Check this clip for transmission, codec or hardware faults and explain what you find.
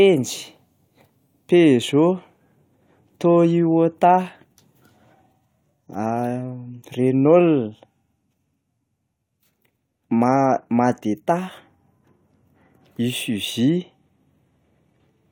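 No faults turn up anywhere in this clip.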